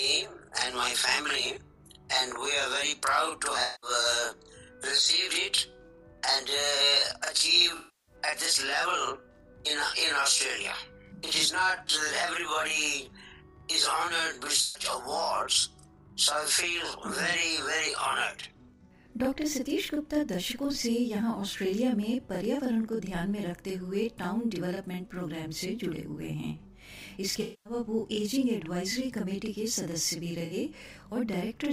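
Channel delay (doubling) runs throughout: one channel arrives 40 ms late and is summed to mono, so every sound carries an equal-level doubled slap.

AAC frame loss with concealment hits at 3.63 to 3.90 s, 7.77 to 8.15 s, 11.76 to 11.94 s (brief scattered dropouts), 14.62 to 14.82 s, 27.42 to 27.73 s and 30.45 to 30.53 s. At each point the decoder patches the missing audio from the last good spectrum. The shorter losses leave a smeared, noisy or phasey patch. The longer ones fade toward a faint noise floor before the sound returns.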